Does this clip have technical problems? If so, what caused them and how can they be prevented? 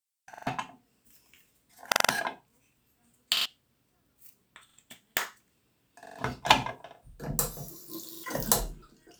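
Yes: a repeated buffer fault at 0.34–0.47, 1.92–2.09, 3.37–3.46, 4.69–4.78, 6.06–6.19 and 8.15–8.24 s. New audio arrived late, so the device replayed its last block, a 43 ms slice that fits a 2048-sample buffer. That slice stutters two to four times with hard joins, and roughly 0.1 to 0.15 s of sound goes missing each time. Prevent it with a larger output buffer or by giving the audio thread higher scheduling priority, so data always arrives before the device needs it.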